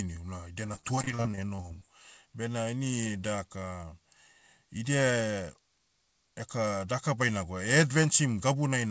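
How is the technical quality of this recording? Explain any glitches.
The recording has one glitch, repeated packet loss (robotic sound), heard over a call path whose band stops at 8 kHz, which fits G.722. Right after "una idia", from 0.66 to 1.86 s, packets kept going missing, 19 gaps of up to 30 ms each. Each gap was filled by stretching the preceding sound, covering about a quarter of that stretch and leaving the speech choppy with pieces missing.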